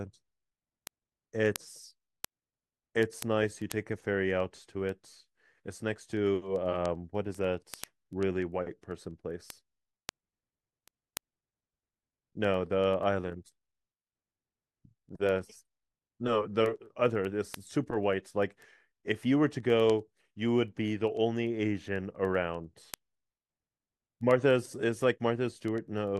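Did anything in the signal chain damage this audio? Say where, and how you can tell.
Yes. Word clock ticks run through the speech from 0.19 s to 26.17 s, a steady train of short ticks about every tenth of a second, around three hundred in all. This happens at the digital interface, where the receiving converter is running on its own clock instead of locking to the sender's. The two clocks differ by roughly 200 ppm, so they slip past each other at that rate, and each slip drops or repeats a single sample, which you hear as a tick.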